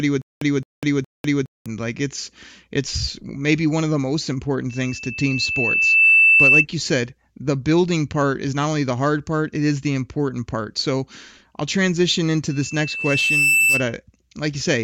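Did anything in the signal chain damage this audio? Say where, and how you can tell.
Yes. From 0.0 to 1.66 s, already under way as the clip opens, there is a stutter with silent gaps: a 216 ms fragment repeats three times, each followed by about 198 ms of digital silence, every 414 ms, before "like it's it's maybe". The even pace and dead-silent gaps, rather than smoothed-over concealment, point to a likely playback or stream buffer stall.

Loudspeaker feedback squeal appears twice, in the room's acoustic loop between microphone and speaker. A 2.6 kHz tone swells over about 1.5 s from 4.69 to 6.66 s, between "one of the most" and "you said the building", reaching about 10 dB above the speech. It returns from 12.50 to 13.94 s, after "so i'll transition into", building over about a second to roughly 5 dB above. Its gradual build rules out steady electrical whine.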